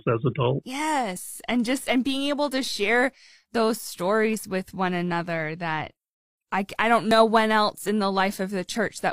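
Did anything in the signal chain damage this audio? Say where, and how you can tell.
Yes. There's an overlap between stream segments, a network and streaming fault. The speech skips at 1.16–1.19 s, 3.14–3.17 s, 5.12–5.16 s and 7.11–7.14 s, each a tiny skip with a chunk of about 20 to 40 ms missing. They land roughly every 2 s, matching 2-second segments. Neighbouring segments' timestamps overlap, so the player trims what it assumes is duplicated audio. That sound wasn't really doubled, so it's lost and the waveform jumps.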